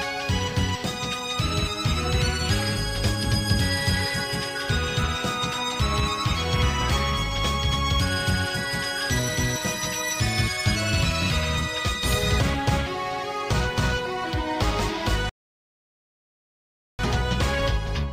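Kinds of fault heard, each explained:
Rebuffering stall: at 15.29 s the sound drops abruptly into dead silence and stays there until 16.99 s, then picks up again at exactly the point where it broke off, with nothing skipped or repeated. The player had used up all the audio it had downloaded and had to halt playback while it waited for more data. Nothing is lost, but the clip runs about 1.7 s longer than it should.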